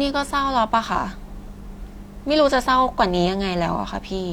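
No technical faults can be heard anywhere in the recording.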